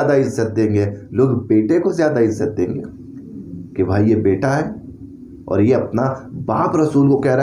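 No technical faults can be heard in this audio. There is nothing to place at any point in time.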